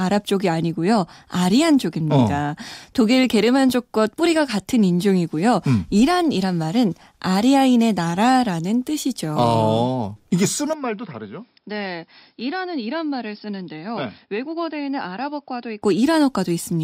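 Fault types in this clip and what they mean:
Input switched to a poorer device: At 10.73 s the speech turns duller and boxier, and it stays that way until 15.82 s. Nothing comes through above about 5.3 kHz. The level drops by about 10 dB. A faint new background noise sits far below the speech. There is no gap at the switch. The change is sudden. That points to the recording likely jumping to a narrower-band microphone or headset input for that stretch.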